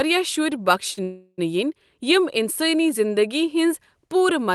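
Speech carried over a call link, where the Opus path leaves a spectrogram ceiling near 12 kHz, has two timing faults close together. From 0.93 to 0.99 s there is a short stall from a late packet: about 37 ms of the last sound is held and repeated, with nothing lost. On a spectrogram this shows as a brief run of flat, smeared frequency bands, and the waveform shows a slightly dipped, buzzy repeat. From 1.03 to 1.40 s a call audio freeze stretches the sound for about 346 ms, including roughly 30 ms of silence, before speech resumes where it left off. The waveform shows a decaying buzz sinking toward flatline, and the spectrogram shows a gap of horizontal streaks thinning to near-blank. The likely cause is packets held up in transit that drained the jitter buffer.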